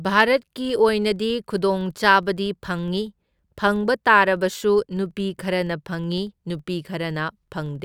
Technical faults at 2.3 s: filter restarted on every block

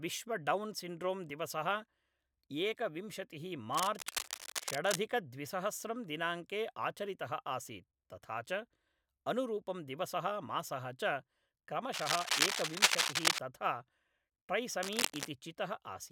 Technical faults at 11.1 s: none

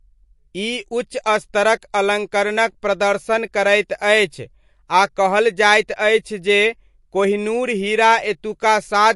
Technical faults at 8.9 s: MP3 compression

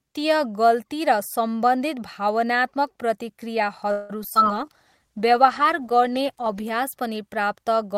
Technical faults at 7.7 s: none

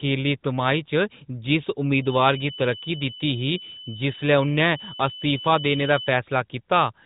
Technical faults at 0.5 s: none

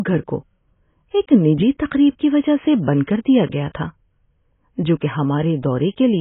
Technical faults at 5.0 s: AAC compression

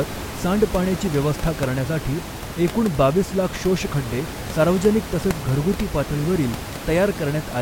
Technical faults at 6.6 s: none

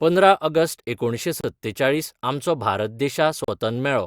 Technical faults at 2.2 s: none

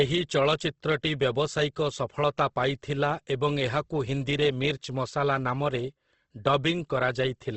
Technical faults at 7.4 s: Opus compression

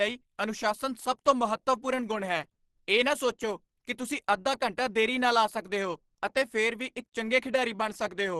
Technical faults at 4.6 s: Opus compression

